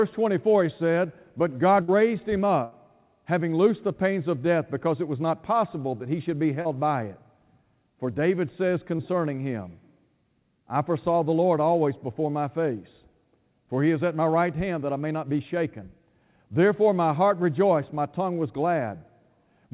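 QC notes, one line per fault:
1.82–1.90 s and 2.64–2.73 s, burst of packet loss: Consecutive packets failed to arrive, leaving holes of about 60 ms and 80 ms. The receiver extended the last sound and faded it, giving a held buzz or dying hiss before the speech resumes at "having loosed the pains", with the gap's content gone.
6.61–6.67 s and 8.97–9.01 s, short concealed packet loss: Roughly 40 ms and 20 ms of audio missed the decoder's deadline, and the receiver filled each hole by continuing the previous sound, then crossfading back. It is heard as a brief smear or wobble between "that he should be" and "by it", and again near 9.0 s, within narrowband speech that has nothing above 4 kHz, which fits a G.711 call path.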